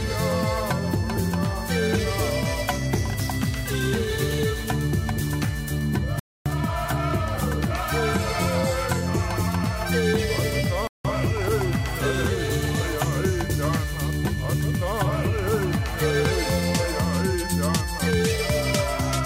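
At 6.19 s the sound drops to silence for 263 ms, and at 10.87 s for 174 ms. That silence marks a Bluetooth stall, likely the headphone buffer running dry while interference delayed packets.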